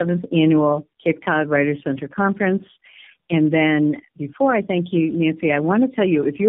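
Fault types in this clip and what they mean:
Tandem speech coding: the speech passes through three speech coders one after another, each re-encoding the previous one's output, so the damage compounds. The sound is rough, muffled and warbly, with nothing above about 3.7 kHz. The layered artefacts suggest a chain of AMR-NB, then G.723.1, then AMR-NB again. A single low-bitrate codec would be narrowband and slightly smeared. Here the smearing is heavier and more watery than any one of those coders produces alone.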